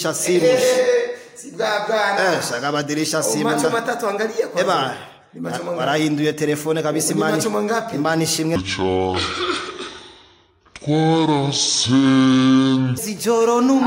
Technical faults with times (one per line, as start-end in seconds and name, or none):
8.56-12.98 section at the wrong speed